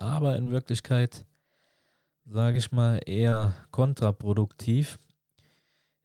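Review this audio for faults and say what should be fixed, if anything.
Three spots of short concealed packet loss: 0.43 to 0.48 s, 2.52 to 2.55 s just before "ich mal", and 3.29 to 3.34 s right after "ich mal". Each lost about 20 ms, which the decoder papered over by extending the preceding sound, leaving a brief smear. A bigger jitter buffer or forward error correction would help.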